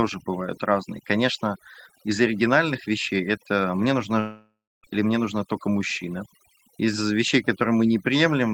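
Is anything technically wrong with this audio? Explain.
Yes, there are two faults. Throughout the speech, overdone noise removal has pushed individual frequency bands down or off wherever they sat near the estimated noise floor, taking quiet parts of the voice with them. The background becomes near silence with twinkling specks. A spectrogram shows scattered isolated dots in the gaps and a patchy, hollowed-out voice.

From 4.19 to 4.86 s, between "вещей это мне нужна" and "или мне нужна только", there is a break that sounds like a long network dropout, likely cause. About 0.64 s of audio is gone. A fading buzz or hiss continues the last sound before roughly 0.28 s of silence. The waveform shows a decaying tail, then a flat line, then the speech resuming with the missing part skipped.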